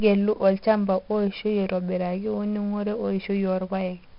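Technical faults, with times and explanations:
Throughout, 4-bit ADPCM compression: each sample of the speech is coded as a coarse 4-bit step from a predicted value, with the step size adapting as it goes. The error rides along with the signal as a gritty hiss on every loud syllable, and sharp onsets smear where the step cannot grow quickly enough. The damage is heavy. Nothing remains above about 5.3 kHz, so the sound is dull, which fits a sample rate near 11 kHz and roughly 44 kbps.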